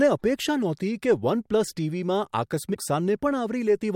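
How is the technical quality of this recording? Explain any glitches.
The recording has one glitch. Damaged data in a compressed stream, from 2.71 to 2.76 s: corrupted bytes made the decoder lose frame sync and resync, leaving a brief blip in the speech.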